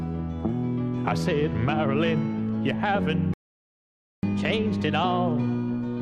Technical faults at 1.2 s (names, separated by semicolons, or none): none